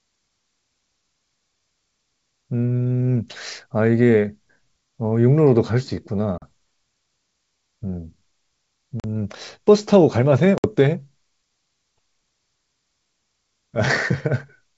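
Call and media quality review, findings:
Packet loss on the ADPCM call, network path. Lost packets filled with silence; decoder predictor and step size then out of step with sender. 6.38–6.43 s: 40 ms hard-edged gap, a couple of packets. 9.00–9.05 s: 40 ms gap, same pattern. 10.58–10.66 s: 60 ms gap, around three packets, consistent with 20 ms packetisation. Each return: brief slight distortion, settling within tens of ms. Wideband G.722 at 64 kbit/s clear between gaps.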